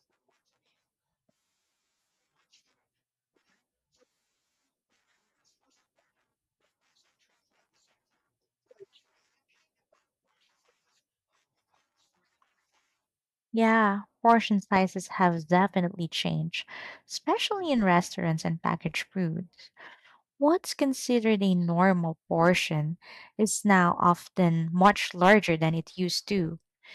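A stage in the chain overloaded, and peaks beyond its limit were cut flat. The result is hard clipping, heard as brief crackle on loud moments of the speech at 14.29–14.34 s (about 2 dB over), 22.44–22.48 s just after "considered a normal" (about 1 dB), and 23.72–24.11 s (right at the limit). It becomes a harsher fuzz at 24.85–25.34 s, where it is driven about 6 dB over.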